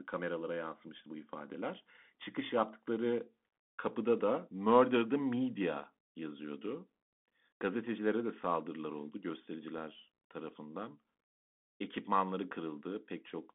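Bluetooth CVSD headset codec affects the whole speech clip: the band runs only from 150 Hz to 3.5 kHz, and one-bit up/down coding, consistent with a 64 kbps link, adds scratchy sibilants and granular hiss.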